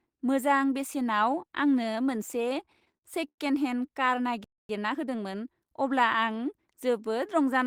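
From 2.37 to 3.40 s, packets reached the receiver late or more slowly than they were played, so its jitter buffer kept running dry. This produced repeated stalls (stutter). Twelve times the receiver held the speech by continuing the last sound, filling about 246 ms in all, roughly a quarter of that second. The longest hold lasted 95 ms. Nothing is lost, but the speech drags and hiccups through the whole passage.

At 4.44 s the output drops to silence for 250 ms and resumes at 4.69 s. The speech stops mid-flow. This playback stall is likely the player running out of data or its output thread being blocked, which leaves nothing to play until it recovers. The break is clearly audible, a hard gap rather than the smeared holds heard earlier.

From 4.69 to 5.67 s the player works off the backlog built up during that silence. It removes short slices of audio and cross-fades across each cut, which plays the material at 1.25 times its normal rate without shifting pitch. 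The time-compressed catch-up makes this second of speech sound hurried while keeping the voice at its own pitch until playback returns to normal speed.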